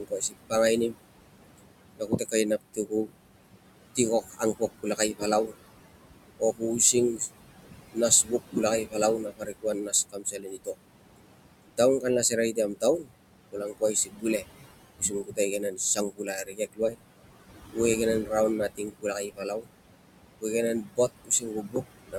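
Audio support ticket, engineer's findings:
Noise suppressor artifacts, whole clip. Background pulled down by about 21 dB between phrases, rising back under speech. Component: noise suppressor, per-frame band gains. Unlike plain room noise (about 11 dB below speech), the level pumps with speech.

Speech cut by the noise suppressor, 0.0–10.75 s and 11.77–22.16 s. Soft consonants and word endings swallowed, dips of about 21 dB and about 22 dB, roughly 3 s lost in each span. Suppressor misreads quiet speech as noise. Unlike a dropout, the background sinks along with it.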